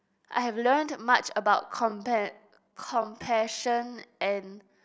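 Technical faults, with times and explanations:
1.52 s to the end at 4.84 s, time-stretched section: the speech suddenly slows to 0.62 times its pace at unchanged pitch, likely from software repeating short pieces, so it drags. Spectrogram harmonics keep their height while syllables stretch, and the waveform shows duplicated grain-like cycles.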